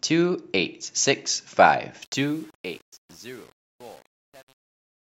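From 2.02 s to the end, the speech's fade-out is computed at too few bits, which fits an 8-bit stage, with no dither. This truncation distortion on a fade leaves gritty, stepped sound from 2.05 s.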